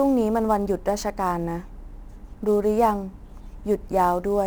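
Sample clock jitter runs through the whole clip: the converter's clock wanders by roughly ten microseconds, so each sample lands slightly off time. Steep, loud and bright parts of the speech gain a fizzy roughness, about 30 dB below the signal, that disappears in pauses.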